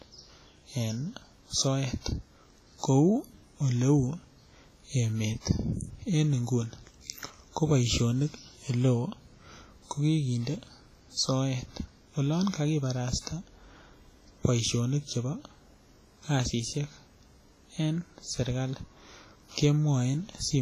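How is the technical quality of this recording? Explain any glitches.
The speech is clearly compromised by codec damage throughout. It sounds like likely WMA compression, heavy, pointing to a low bitrate near 24 kbps: long-block quantisation noise smears into a ringing, washy hiss that breathes, and nothing survives above 15.3 kHz.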